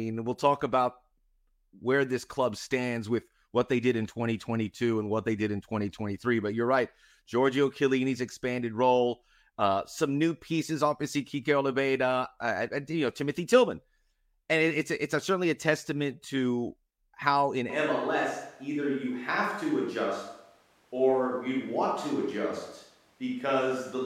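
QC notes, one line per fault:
17.70 s to end: switch to a distant microphone. The voice abruptly turns roomy and hollow and loses its low end, and it stays that way to the finish. Loudness hardly changes, but room noise now sits roughly 35 dB under the speech. The likely cause is that the close mic's feed dropped out and the recording fell back to a mic farther from the talker, which picks up more reflections and less proximity bass.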